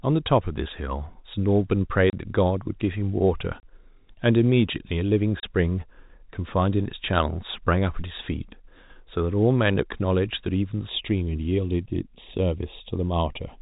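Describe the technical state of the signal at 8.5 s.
At 8.5 s the speech is intact, carried through ordinary G.711 telephone coding that holds it below 4 kHz with no fault at that point.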